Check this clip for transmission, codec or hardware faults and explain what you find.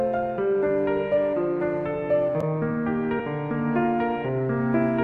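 One fault is present: a short burst of damaged data in a compressed stream at 3.18 to 3.20 s. For about 20 ms, some of the compressed bytes were lost, overwritten or mixed with foreign data. The decoder could not make sense of the frames there, lost its place in the bitstream and had to hunt for the next valid frame header before playback continued. It is heard as a brief blip.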